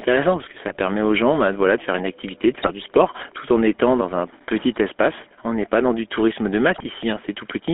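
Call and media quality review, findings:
GSM full-rate codec, throughout: buzzy, gravelly speech from coarse pulse-train excitation, consistent with 13 kbps full-rate coding; band limited to roughly 250 Hz to 3.5 kHz.

GSM bit errors at 0.68–0.79 s (after "parce que"), 2.54–2.69 s (after "faire une activité de"), 6.78–6.87 s (after "dans du tourisme de"): squawks and gargling as corrupted filter, pitch and gain parameters distort short frame runs.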